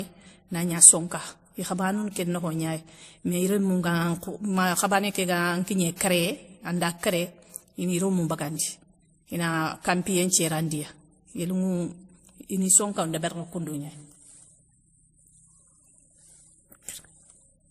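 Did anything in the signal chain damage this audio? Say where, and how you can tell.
Yes, at the codec stage, throughout the speech. Nothing reaches above 15.2 kHz, and two distinct sets of coding artefacts overlap: a smeared, swirly texture typical of low-rate MP3 plus a second layer of WMA-style graininess. This is likely transcoding between lossy codecs, consistent with roughly a 42 kbit/s MP3 re-encoded as 64 kbit/s WMA. The second encoder wasted bits re-coding the first one's damage. On a spectrogram, look for a hard shelf at 15.2 kHz and blotchy high-frequency patches.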